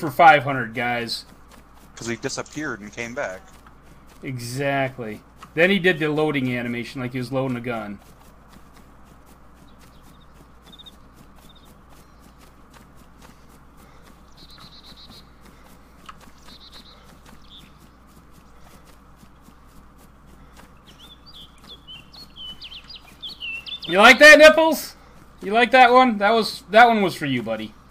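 No technical faults can be heard anywhere in the recording.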